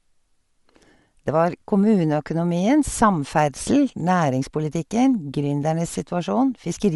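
A short speech clip with plainly audible codec damage from start to finish, most likely from Bluetooth LC3 compression. Nothing comes through above 11.5 kHz, and the top end has that grainy, breathy noise-filled texture. It fits a 48 kbps stream with 10 ms frames.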